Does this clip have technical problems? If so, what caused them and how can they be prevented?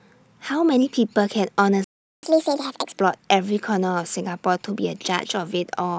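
Yes. A playback stall cuts the speech off mid-flow at 1.84 s, and the output stays silent until 2.23 s, a gap of about 0.39 s. The likely cause is the player running out of buffered data or its audio thread being blocked. On a waveform this is a flat line; on a spectrogram, a blank vertical band across all frequencies. A larger playback buffer and a high-priority audio thread that never waits on network or disk would prevent it.

Catch-up at higher speed follows from 2.23 s to 3.00 s. The player runs its backlog through a resampler at 1.5 times normal speed, so the speech is both faster and higher, by roughly seven semitones, before returning to normal. On a spectrogram the harmonics and formants shift upward and the syllables are compressed in time, then drop to normal height at 3.00 s. Dropping the backlog, or catching up with pitch-preserving time-stretching, would prevent it.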